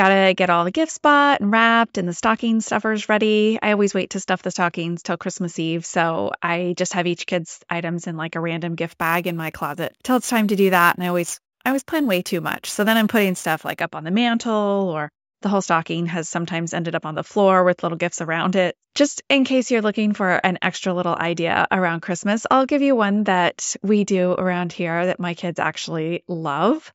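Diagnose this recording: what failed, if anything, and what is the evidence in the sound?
Sample-rate conversion stage: from 8.87 to 13.81 s there's imaging from sample-and-hold upsampling, a metallic fizz at 8 to 16 kHz, about 18 dB down, tracking the speech. This fits a 16 kHz source repeated up to 44.1 kHz without filtering.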